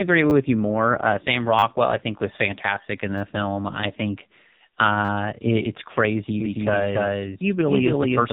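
Speech heard through a heavily damaged, buzzy and synthetic-sounding channel with nothing above 3.8 kHz is the signature of the AMR narrowband mobile codec. AMR-NB rebuilds the voice from a vocal tract model driven by a pitch predictor and a handful of pulses per 5 ms subframe. The degree of buzz points to one of its lowest modes, around 5.9 kbps. Over that sits a series of short, hard-edged stutters, each a tiny fragment played two or more times in a row. The first comes at 0.30 s just before "you more" (two extra plays). Then come 1.59 s (four extra plays), 3.18 s between "think was fantastic in" and "film I think" (three), 5.05 s just before "it it's crazy" (four), and 6.84 s (one). This is a repeated buffer: fresh audio arrived late, so the playback device replayed the last block instead, and the fragment length fits a 10 ms buffer. From 6.40 s to the end, a second full-band copy of the speech runs about 300 ms behind the first at roughly the same level. 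It switches in abruptly and carries no room colour or decay. This doubled audio track likely comes from the same audio being mixed in twice, either through a second, slower capture path or an edit holding two out-of-step copies.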